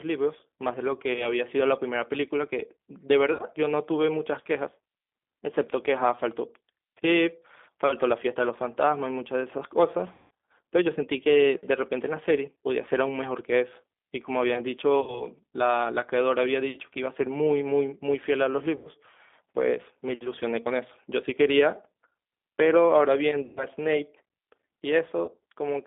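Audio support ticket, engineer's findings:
G.729 codec (G.729A, 8 kbit/s) throughout: rough, slightly synthetic speech, plainly audible. Spectrogram shows a hard band of 250 Hz to 3.6 kHz, empty above and below. Cause: low-rate vocal-tract filter plus sparse-pulse excitation rebuilding the voice.

VoIP packet loss concealed by the speech codec at 1.13, 3.33, 10.13, 15.01, 18.76, 23.45 and 25.25 s: stretched, fading buzzy tone or coloured noise. Roughly 30 to 240 ms lost per event. Worst at 10.13 s, with 240 ms lost across 300 ms and a longest run of 180 ms. Spectrogram shows smeared, repeated harmonics. Waveform shows periodic cycles decaying in level, with weak recovery afterwards. Cause: decoder extrapolating its last pitch and filter.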